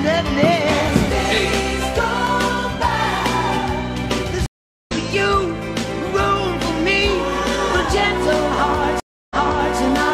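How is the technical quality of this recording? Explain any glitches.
Two stream reconnects disrupt the recording. At 4.46 to 4.92 s, about 0.4 s of silence ends with the sound resuming roughly half a second further on. At 9.0 to 9.77 s, a 305 ms gap ends with a 464 ms stretch replayed. Each time, a fresh decoder restarts mid-stream with a brief fade-in. Unlike a simple dropout, the sound picks up at a different point rather than where it stopped.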